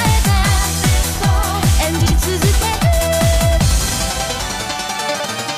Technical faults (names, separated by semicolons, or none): frames out of order